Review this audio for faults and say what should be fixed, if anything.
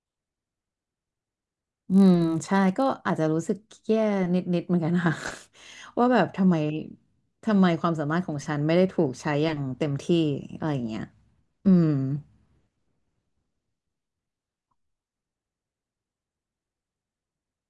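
From 0.00 to 3.12 s there's a 50 Hz buzz under the speech: the resampler restarted on every 20 ms block, leaving a small error at each edge. Fix it by keeping the resampler's state running across blocks.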